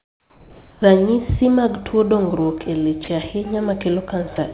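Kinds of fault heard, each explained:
Comfort noise in place of the background: From the start to 0.82 s the real background is gone, replaced by a steady, featureless hiss. It sits about 3 dB lower than the true background would be. That points to the sender pausing transmission during silence and the receiver filling the gap with synthetic noise, likely discontinuous transmission. The background itself is quiet, about 31 dB below the loud parts of the speech.
Onset clipped by the voice detector: Speech begins abruptly at 0.8 s. Its soft first moment, about 20 ms, is missing, and the synthetic noise runs right up to the hard start. The detector was likely slow to notice the sound returning, so those opening milliseconds were never sent. The result is a word that starts abruptly instead of easing in. Because the cut is so short, it is brief.
Sound dropped by the voice detector: Twice, short stretches of speech vanish into steady noise. 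The first comes at 3.04 s, right after "mag tuo dongruok e", and lasts 40 ms. The second comes at 4.36 s and lasts 20 ms. In each case quiet speech was likely mistaken for background and transmission paused. The speech is briefly replaced by the flat filler noise. Throughout, the narrowband call path stops everything above 4 kHz.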